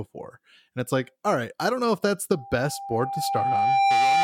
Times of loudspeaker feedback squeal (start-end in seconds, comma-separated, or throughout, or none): 2.32-4.23